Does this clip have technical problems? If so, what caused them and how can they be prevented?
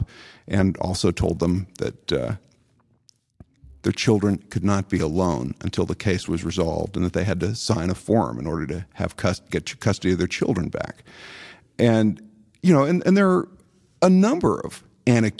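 Yes. From 0.84 to 7.47 s the speech carries a buzz at 100 Hz from a resampler restarted on every block. Each 10 ms block was converted from 48 kHz to 24 kHz separately, so the filter lacked the neighbouring samples at every block edge and left a small error there. On a spectrogram this shows as thin vertical lines every 10 ms, present only where there is signal. Running one continuous resampler that keeps its state between blocks prevents this.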